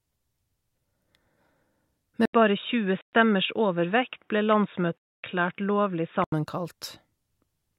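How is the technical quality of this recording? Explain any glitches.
The recording has two kinds of glitch: a stretch of dull, band-limited sound in the middle, and two short holes where the audio vanishes.

From 2.25 s to 6.32 s the sound turns boxy and muffled. Nothing survives above 3.8 kHz, the level drops by about 5 dB, and a faint new noise floor appears well below the speech. An 80 ms silence marks the switch. This is likely an input switched to a poorer device, such as a headset's call profile taking over the microphone. It differs from a dropout because the tone changes for four seconds rather than the sound simply disappearing.

Within that stretch there are two Bluetooth dropouts, at 3.01 s lasting 116 ms and at 4.98 s lasting 255 ms. Each is a gap of silence, after which the sound picks up further along, as though it had kept playing during the hole. The likely cause is audio packets failing to reach the headphones in time, so playback stayed silent until good data arrived. 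Unlike the device switch, the tone on either side of each gap stays the same.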